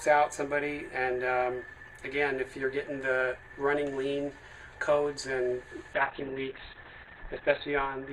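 At 5.94 s there's a call bitrate drop that runs to the end. The encoder got starved, going from what sounds like around 32 kbps to something near 7 kbps, and the top end collapses from 12 kHz to 4 kHz, leaving the sound muffled and watery for the last 1.67 s.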